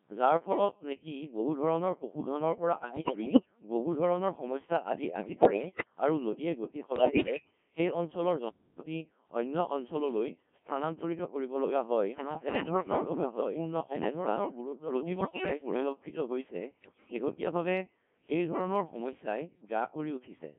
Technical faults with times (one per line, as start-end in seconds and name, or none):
0.00-20.58 Codec 2 vocoder
2.82-3.46 bit errors on digital voice radio
5.16-5.85 bit errors on digital voice radio
6.96-7.51 bit errors on digital voice radio
11.59-15.89 doubled audio track
12.16-13.05 bit errors on digital voice radio
15.16-15.46 bit errors on digital voice radio
16.81-17.18 bit errors on digital voice radio